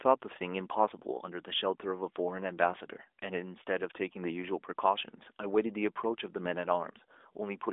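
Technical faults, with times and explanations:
No technical faults can be heard: the speech comes over an AMR narrowband mobile link whose 300 to 3600 Hz phone band and 12.2 kbps coding leave only light codec marks on it.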